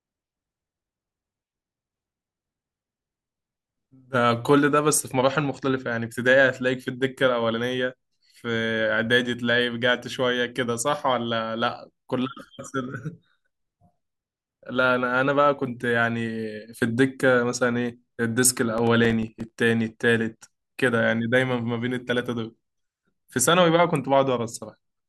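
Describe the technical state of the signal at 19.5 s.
At 19.5 s the signal is just coming out of a burst of processor overload crackle that runs from 18.78 s to 19.50 s. The processor repeatedly misses its deadlines for very short buffers, around 3 ms each, and roughly a dozen or more go unfilled, each leaving a hard-edged gap of silence. Packed together, these tiny gaps give a gritty, tearing crackle over the speech. Unlike a single dropout, it is a dense cluster of minute holes that stops abruptly once the load eases.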